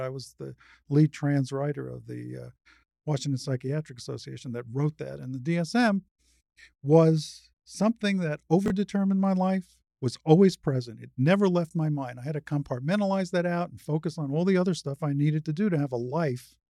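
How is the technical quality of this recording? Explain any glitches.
The recording has one glitch: chunks out of order at 8.66 to 8.70 s, just after "was something that". A 20 ms chunk landed one chunk late and plays after the one meant to follow it, so the sound briefly jumbles, with three hard joins. On a waveform these show as abrupt step discontinuities. On a spectrogram they appear as thin vertical broadband lines.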